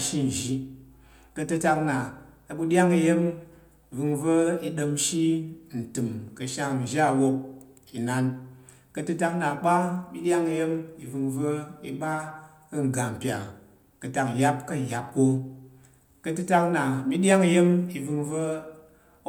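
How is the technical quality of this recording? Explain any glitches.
No technical glitches can be heard anywhere in the recording.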